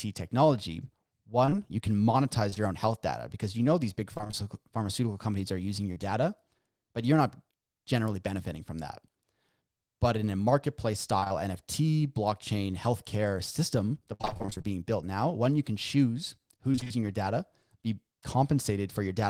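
Choppy stretches with pieces of speech missing come at 1.45 to 2.58 s, 4.14 to 4.44 s after "you know these big", 11.20 to 11.32 s after "but in a marketplace", 14.14 to 14.66 s between "blockchain healthcare system the" and "built now", and 16.72 to 16.92 s. This is repeated packet loss (robotic sound). Audio kept failing to arrive, and each gap was patched by extending the last sound. The worst run, near 14.1 s, has twelve gaps.

A brief smear at 5.92 to 5.98 s is short concealed packet loss. About 40 ms never arrived in time and was filled by continuing the preceding sound before blending back.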